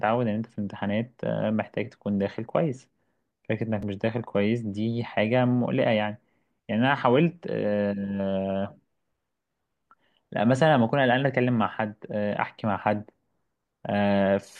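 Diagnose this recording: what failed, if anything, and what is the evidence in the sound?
Chunks out of order at the driver or buffer stage: one small block of speech was written late and played after the blocks that should have followed it. Between 3.81 and 3.83 s there is a brief jumbled flicker. The displaced piece is about 5.3 ms long, and it lands roughly 16 ms late. Nothing is lost, but the misplaced chunk creates three hard joins.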